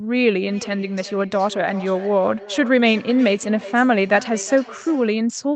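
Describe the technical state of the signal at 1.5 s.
At 1.5 s you're inside a feedback echo between two devices, running from 0.38 to 5.25 s. A second device's playback is leaking into the other's microphone, so the speech comes back roughly every 0.4 s, thinner and ringier, peaking about 17 dB below the speech.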